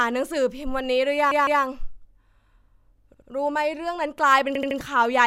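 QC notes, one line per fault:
1.31–1.62 s, 3.14–3.29 s, 4.55–4.78 s: repeated frames. A run of compressed frames was delivered to the decoder more than once, so the same slice of speech plays again in place. At 1.31 s a 157 ms block, which fits about six frames, repeats twice more. At 3.14 s a 78 ms block, about three frames, repeats twice. At 4.55 s a 78 ms block repeats three times. Each is heard as a stutter, and together they stretch the clip by roughly 0.7 s.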